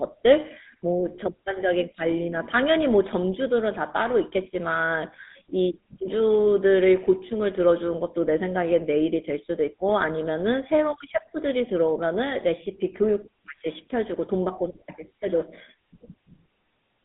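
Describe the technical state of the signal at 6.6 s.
At 6.6 s the speech is passing through a GSM full-rate codec, as it does for the whole clip. The codec models the vocal tract and excites it with sparse regular pulses, which gives a plainly audible buzzy, gravelly roughness. The band is limited to roughly 200 Hz to 3.7 kHz, which fits the 13 kbps full-rate coder.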